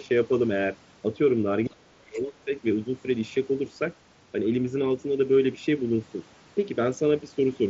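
From 1.66 to 2.51 s the speech gets pushed down hard, bottoming out around 30 dB below where it should be, and about seven-tenths of a second of it is affected in total. It dips, loses its high end or cuts out in pieces. That pattern is likely speech suppressed in double talk: both ends talking at once, and the echo canceller couldn't tell the near talker from the loudspeaker echo, so it turned everything down.

Inside that stretch, from 2.14 to 2.19 s, there's a brief scrap of the other side's voice leaking through, sitting roughly 35 dB under the speech, so it's faint. It's likely loudspeaker playback that the echo canceller didn't fully scrub out of the mic.

At about 6.39 s there's a tiny concealed Bluetooth headset packet loss. Around 15 ms of audio went missing between headset and phone, which fits two lost frames, and the receiver patched the gap by repeating a matching slice of the waveform just before it. 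The link itself runs over mSBC, the wideband headset codec, at 61 kbps.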